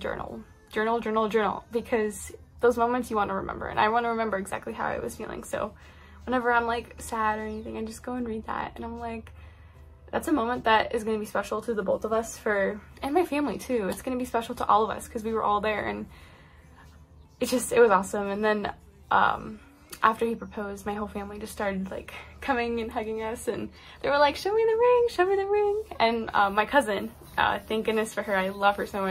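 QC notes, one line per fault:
No audible faults detected.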